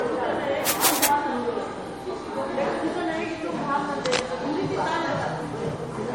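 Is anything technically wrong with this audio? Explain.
Yes, there are two problems. Throughout, the sound has a hard ceiling at 17.8 kHz and a smeared, doubly processed texture, likely from transcoding between lossy codecs. The blend of artefacts points to a low-rate MP3 around 48 kbit/s re-encoded to WMA near 96 kbit/s. The second encoder wasted bits reproducing the first one's damage, so its swirl and its own blur overlap. A spectrogram shows a flat cut-off with patchy, blocky high bands beneath it.

From 0.65 to 1.09 s and again from 4.05 to 4.21 s, harsh scratching rides over the sound at roughly the same loudness. This is cable scratch noise, likely from a worn contact being moved, which makes its resistance jump erratically. The waveform shows dense, jagged bursts, and the spectrogram shows broadband vertical streaks.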